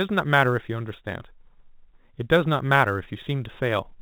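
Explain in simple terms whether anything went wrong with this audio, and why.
The clock timing the recording wobbled by a few millionths of a second, a fault called sample clock jitter. Across the whole clip, this adds a hiss or roughness that grows on louder, sharper sounds, within the narrow telephone sound that stops near 3.8 kHz.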